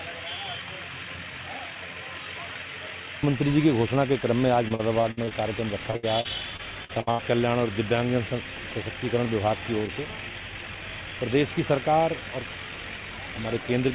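Repeated packet loss (robotic sound) breaks up the audio from 4.68 to 5.33 s and again from 5.91 to 7.20 s, over call-path audio with nothing above 4 kHz, which fits a G.711-type codec. In each stretch, packets kept going missing and each hole was patched by extending the preceding sound, leaving a choppy texture with pieces missing. The longest gaps are 60 and 77 ms. On a spectrogram, these show as short smeared, repeated blocks; on the waveform, as copied, flattened segments.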